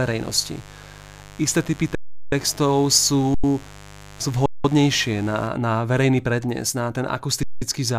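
Speech recording with two separate faults. First, mains buzz: switching spikes from something on the 50 Hz supply, such as a dimmer, a rectifier or a poorly shielded lead, got into the signal path twice per mains cycle. That fills everything from the start to 5.47 s with a steady, raspy buzz built from 50 Hz harmonics reaching into the kHz range, sitting about 20 dB below the speech. Second, four underruns with held sample: the output buffer ran dry and the converter froze on its last value until data arrived again. The waveform goes flat, so the speech simply stops, with little or no click, at 1.95–2.32 s (372 ms), 3.34–3.44 s (93 ms), 4.46–4.64 s (186 ms) and 7.43–7.62 s (186 ms). Each time playback picks up where it left off, so the returns are soft rather than clicked, and the gap lengths fit whole buffers of 4096 to 16384 samples.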